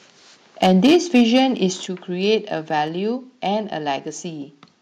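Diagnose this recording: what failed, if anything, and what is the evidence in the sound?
Microphone overload at the analogue-to-digital converter: the input gain was likely set too high, driving peaks about 8 dB past full scale. From 0.62 to 1.43 s the loudest syllables have a harsh, crackling edge. Their waveform tops are sheared flat on a few percent of samples, so the rounded peaks of the speech become squared-off plateaus that add odd, buzzy harmonics the voice doesn't have.

Microphone volume stepped down, at the call-processing stage: automatic gain control in the call software likely reacted to the overload by cutting the device's input volume in discrete steps. At 0.87 s, inside the distorted stretch, the level drops abruptly by about 2 dB. At 1.86 s it drops again, by about 5 dB. Each time, the voice and the background noise fall together in a single step rather than fading.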